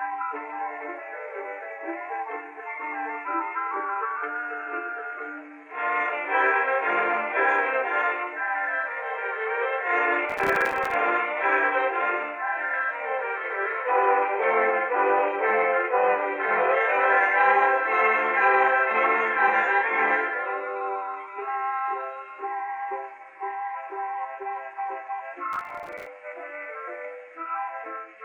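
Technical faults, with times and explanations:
10.30–10.94 s, processor overload crackle: the processor falls behind and misses dozens of buffer deadlines again and again. The buffers appear to be only a few milliseconds long, and each missed one is left as silence. The result is a dense run of tiny hard-edged gaps, heard as gritty crackle over the sound for about 0.64 s.
25.53–26.06 s, processor overload crackle: the same overload returns, again missing a few dozen very short buffers, each left silent. The sharp breaks cause a burst of tearing crackle lasting about 0.53 s, which stops once the load eases.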